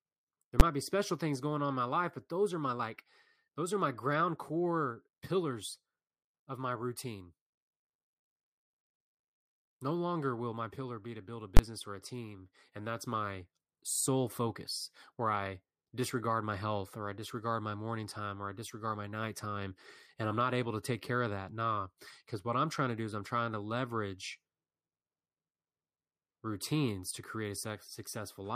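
At 0.60 s, just before "might be special things", and from 11.57 to 11.59 s, between "be to build a" and "or a team and", invalid numbers at full scale pin the output to maximum for 10 ms and then 20 ms. Each lands as a single sharp bang. Unlike ordinary clipping, the overload does not follow the speech waveform.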